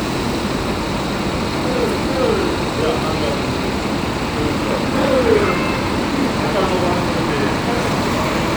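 No technical faults can be heard anywhere in this recording.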